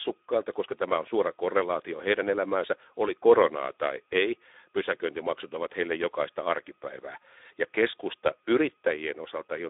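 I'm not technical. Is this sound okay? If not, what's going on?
No. Throughout the clip, the speech passed through the Speex codec, an older voice-chat compressor that squeezes speech into very little data, so it sounds hoarse and noisy, with nothing above about 3.8 kHz.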